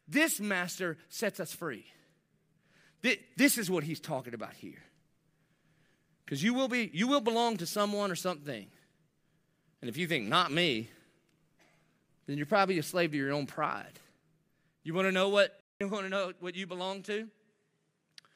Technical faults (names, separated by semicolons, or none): input switched to a poorer device